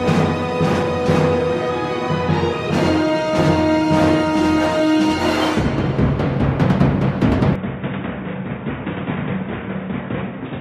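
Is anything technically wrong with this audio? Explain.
Yes. From 7.56 s to the end, the sound turns dull and boxy with no gap. This is likely an input switched to a poorer device. That device passes nothing above 3.8 kHz. The level drops by roughly 10 dB, and faint new background noise appears.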